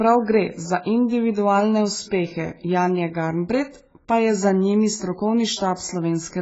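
Likely heavy AAC compression, at a bitrate that sounds near 16 kbps, strips everything above 7.6 kHz throughout, leaving the speech dull and smeared.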